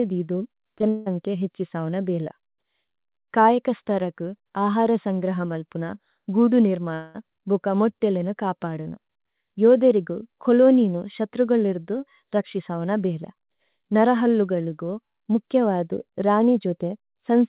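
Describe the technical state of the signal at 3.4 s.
At 3.4 s the speech is intact, with no dropout, glitch or distortion, only the narrowband sound of the call path, which carries nothing above 4 kHz.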